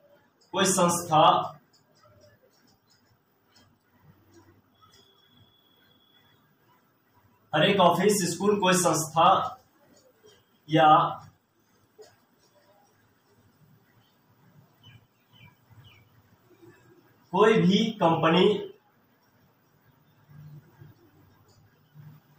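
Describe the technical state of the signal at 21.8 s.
At 21.8 s the signal is intact, with no dropout, distortion, glitch or other audible fault at that moment.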